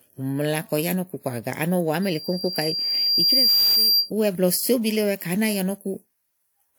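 From 2.02 s to 4.10 s, loudspeaker feedback squeal rises over the speech. A microphone is picking up its own loudspeaker. At 4.8 kHz the loop gain exceeds one. That single tone swells over about one and a half seconds, ending roughly 5 dB above the speech.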